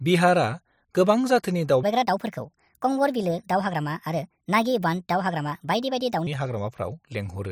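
From 1.83 s to 6.27 s the speech runs at the wrong speed, about 1.37 times too fast. Pitch rises with the tempo by roughly five semitones, so the voice turns high and hurried, then drops back abruptly at 6.27 s. The likely cause is a section resampled or played against a mismatched clock. On a spectrogram, harmonics and formants jump upward at 1.83 s and fall back at 6.27 s. The waveform shows syllables compressed closer together across that span.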